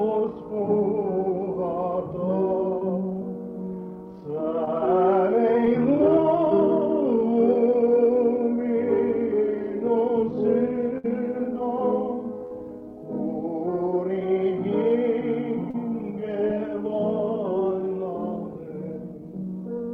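Short concealed packet loss occurs at 2.79, 4.65 and 5.65 s. About 20 ms never arrived each time. The receiver extended the preceding sound, leaving a brief smear or wobble.

Bursts of packet loss follow at 10.98 and 12.46 s, losing 60 ms and 40 ms. The gap is bridged by a fading continuation. Audio then resumes with that stretch missing.

Short concealed packet loss returns at 15.71 s, covering 40 ms, and at 16.48 s, covering 20 ms. The last repair adds a little extra length.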